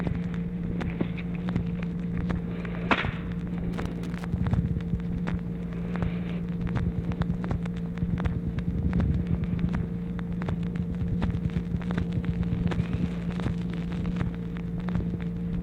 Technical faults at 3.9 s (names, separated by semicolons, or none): loose connector crackle